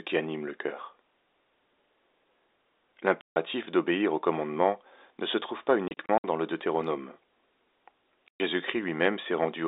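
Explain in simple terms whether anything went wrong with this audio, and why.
Packet loss filled with silence chops the speech three times, leaving hard gaps at 3.21–3.36 s before "d'obéir au commandement ne", in short bursts from 5.88 to 6.24 s after "ne se trouve pas", and at 8.28–8.4 s. The gap sizes point to lost 30 ms packets.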